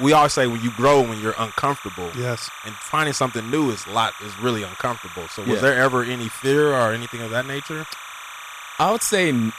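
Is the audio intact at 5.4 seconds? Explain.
No, timecode bleed runs through the whole clip, including 5.4 seconds. A linear timecode signal from an adjacent track or cable is leaking into the speech. That code is a square wave flipping between two pitches near 1 and 2 kHz, with a rhythm that fits 29.97-frames-per-second code. At roughly 15 dB below the speech, it sits as a constant, chattering, chirping warble underneath the speech.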